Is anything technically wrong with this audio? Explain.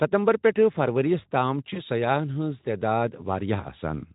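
Yes. At 1.73 to 1.80 s there is VoIP packet loss concealed by the speech codec. About 20 ms of data went missing, and the Speex decoder, whose light coding texture runs through the whole clip, filled the hole by extending its last pitch and filter settings at falling gain. The result is a short stretched patch, a buzzy tone or coloured noise that fades, and the voice stays weak or distorted for tens of milliseconds or more after real data resumes. On a spectrogram, flat repeated harmonics replace the natural pitch movement. On the waveform, the envelope sags across the span.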